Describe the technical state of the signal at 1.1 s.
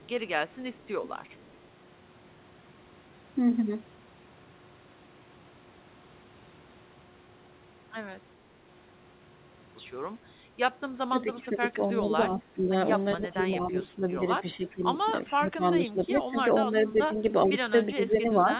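A faint, delayed copy of the speech trails about 0.41 s behind it, from 0 to 1.57 s: an echo leak, likely from a loudspeaker echo canceller letting it through.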